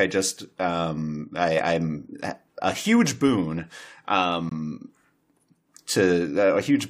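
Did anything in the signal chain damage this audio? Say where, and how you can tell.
Yes. A gap between stream segments sits in this speech from 4.49 to 4.52 s, at the playback stage where the stream is reassembled. The sound stops dead for about 20 ms with hard edges at both ends and resumes with nothing missing. That points to timing, not data loss: the time stamps of two consecutive segments, each about 6.0 s long, leave a small hole that the player fills with silence, lengthening the clip by that much.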